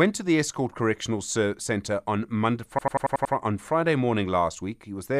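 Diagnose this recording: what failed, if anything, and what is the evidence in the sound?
A system hang loop at the driver or buffer stage: from 2.79 to 3.34 s the same 92.88 ms slice repeats exactly six times, a machine-gun stutter at 10.8 Hz, which fits a 4096-sample ring buffer replayed while the system stalled. Identical repeats, not silent gaps, separate it from dropouts.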